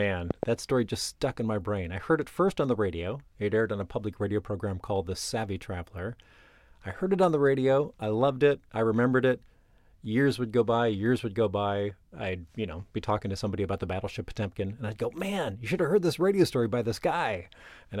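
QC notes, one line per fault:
0.31–0.45 s, loud pop: a sudden voltage pulse, likely from a plug, switch or static discharge, enters the signal chain, and the circuits after it shape it into two sharp pops well above the speech level, which continues underneath just before "that story just stuck".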